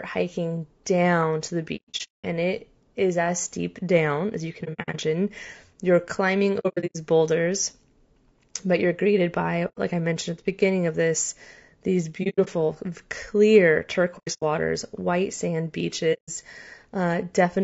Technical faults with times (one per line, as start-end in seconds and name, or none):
0.00-17.63 low-delay AAC compression
1.76-2.25 AAC frame loss with muting
4.63-4.96 AAC frame loss with muting
6.59-6.96 AAC frame loss with muting
9.68-9.79 AAC frame loss with muting
12.23-12.48 AAC frame loss with muting
14.18-14.44 AAC frame loss with muting
16.13-16.30 AAC frame loss with muting